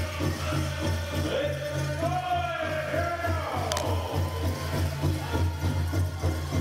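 Cable scratch noise runs from 3.65 to 3.86 s. Dense, uneven scratching sits just under the sound, likely a worn connector being moved.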